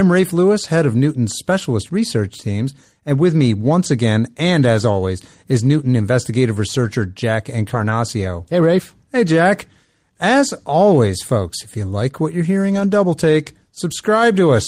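Speech with three bursts of lost packets rebuilt from error correction, at 6.83 to 6.89 s, 7.69 to 7.91 s, and 12.71 to 12.85 s just after "you like what you're". Packets went missing, and the decoder filled each hole with the low-bitrate copy carried in the following packet. There is no dropout, but about 40, 120 and 80 ms of audio, consistent with two, six and four lost packets, sound rougher and noisier.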